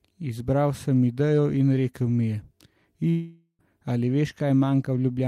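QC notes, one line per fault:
3.09–3.61 s, long network dropout: the speech breaks off into a smeared buzz that hangs on the last sound and fades over roughly half a second, then goes silent for about 70 ms before the speech returns mid-flow with about half a second of it simply gone. This is likely a stall in packet delivery, with the receiver stretching the last audio it had to cover the gap until real data arrived again.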